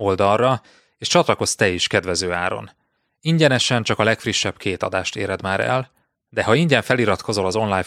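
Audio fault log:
1.40 s, overlap between stream segments: a tiny skip in the speech just before "te is kedvező áron", where roughly 11 ms of audio drops out and the waveform jumps across the gap. Two adjacent stream segments, which here fall on a 2.0 s grid, carried time stamps that overlapped. The player treated that stretch as duplicated and trimmed it, although the sound had never actually been sent twice.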